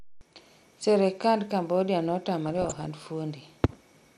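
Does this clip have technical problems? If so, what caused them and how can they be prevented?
Yes. The speech sounds dull and granular throughout, with thin, gurgling highs. This is likely MP2 compression, which fits about 80 kbps. Upper sub-bands drop out, and the rest are coarsely quantised. Use a higher bitrate or a more efficient codec to prevent it.

From 2.46 to 2.86 s there is DAB burbling, a patch of short noise blips. Reception errors slipped past correction and corrupted samples, putting short blips of noise in single sub-bands. Better antenna placement or a stronger signal prevents it.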